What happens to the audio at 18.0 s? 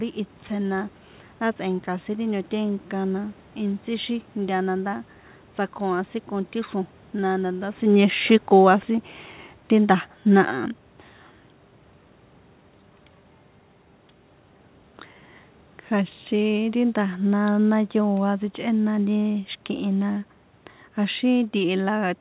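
At 18.0 s the level is in the middle of an automatic gain fall. It runs from 16.31 s to 19.29 s, ending just before "xi̱kihi na". The call's automatic gain control judged the input too loud or its background noise too strong. It then pulled its gain down slowly, by about 3 dB overall. You hear the speech sink gradually rather than drop at once. The room background sinks with it, which shows the change comes from the gain stage.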